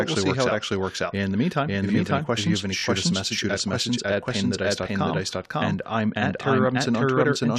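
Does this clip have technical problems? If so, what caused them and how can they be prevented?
Yes. Throughout the speech there is a doubled audio track: a second, full-band copy trails the original by about half a second at roughly the same level, with no decay or room colour, so every syllable is echoed cleanly. This is likely a second capture of the same signal arriving over a slower path, or an edit that left two out-of-step copies in the mix. To prevent it, make sure each source is routed and recorded only once, and mute any monitoring or loopback return.

Between "you have any questions" and "us a message at", from 2.78 to 2.82 s, there is a case of repeated frames. The same 21.3 ms block plays two extra times, which is heard as a brief stutter. The pattern points to a single compressed frame being written or sent more than once. It adds 42.7 ms to the audio. To prevent it, use an encoder and transport that detect duplicate frames and discard them before decoding.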